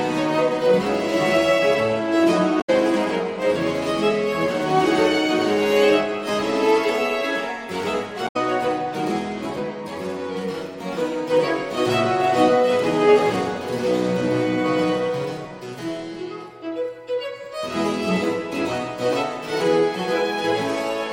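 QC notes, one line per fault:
2.58–2.70 s and 8.24–8.36 s: damaged data in a compressed stream. Each event lasts about 0.12 s and is heard as a short glitch cutting across the sound. Corrupted bytes in the encoded stream cause the decoder to misread the affected frames and lose frame sync. It then searches until it finds the next valid frame header and resumes normal decoding.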